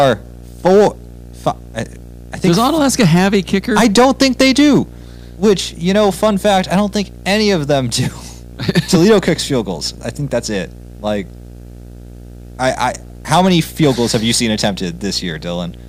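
Speech runs under two faults that last the whole recording. The first is video or display buzz: a steady buzz at 59.94 Hz with hash riding above it, plus a thin whine at 15.7 kHz, all sitting around 20 dB below the speech. A screen or video cable is coupling into the audio path, putting the picture's field rate and line rate into the signal. What separates it from ordinary mains hum is that 59.94 Hz fundamental, just off a clean 60 Hz, together with the line-rate tone near 15.7 kHz, which power-line hum never carries. The second is hard clipping. The speech is driven about 10 dB past what some stage can pass, so its peaks are sliced flat, and a small share of the samples, roughly one or two percent, land on that ceiling. The flat tops throw harmonics far up the spectrum, heard as harsh crackle and fuzz on the louder syllables. Unlike soft saturation or a limiter, which round peaks off gently and keep the tone fairly smooth, this distortion is abrupt and gritty, appearing only on the peaks that cross the limit.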